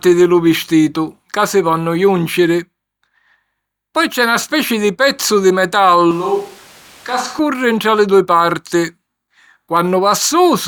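Speech that suddenly turns roomy and hollow right after "speci di pezzu di", at 6.11 s. The bass thins, the level falls by roughly 5 dB, and background noise comes up to around 25 dB below the speech. At 7.39 s, just before "ntra li dui", it snaps back to the close, full sound. The abrupt change in both directions likely comes from a switch to a distant microphone, filling in while the close microphone's signal dropped out.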